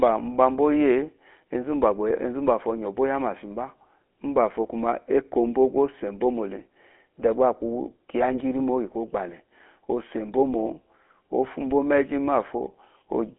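GSM full-rate codec throughout: coarse pulse-driven vocal-tract modelling, which fits a 13 kbps rate, leaves the speech plainly buzzy and gravelly, band-limited to 250 Hz–3.4 kHz.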